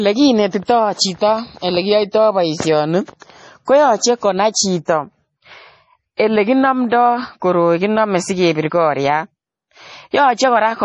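A speech recording that has likely been through heavy MP3 compression, starved of bits in a way that fits a low bitrate around 32 kbps. The encoder has cut everything above 10.8 kHz and dropped weak frequency lines that flicker between frames, so the sound is dull, watery and swirly, with metallic chirps on s sounds. Pre-echo appears from 6.17 to 6.19 s: a transform block spread its quantisation noise across about 27 ms ahead of a sharp attack, so a brief hiss leads in and the onset sounds smeared.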